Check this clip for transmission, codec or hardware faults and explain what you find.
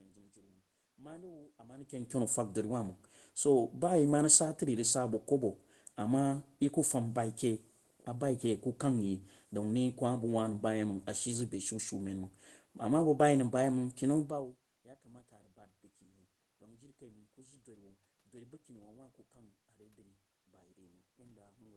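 Nothing here points to a transmission, codec or hardware problem; the background noise of the room and the moments around 1.5 s and 14 s where the talker's distance from the microphone changes are just part of the recording, and the softened top end fits an ordinary call link with the high frequencies trimmed at about 12 kHz.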